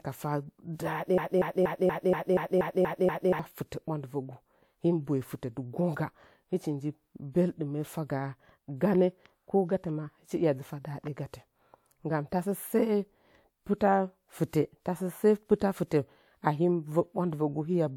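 A stalled player or stream likely kept resending its last buffered fragment, producing a broken-record loop from 1.18 to 3.39 s: a 239 ms slice of speech repeats exactly, back to back, nine times, and the speech that should have filled that stretch is lost.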